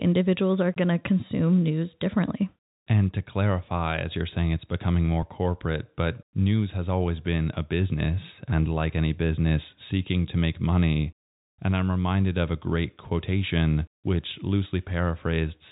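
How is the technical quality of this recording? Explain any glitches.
The technical quality of this recording is sound, with no glitches to explain.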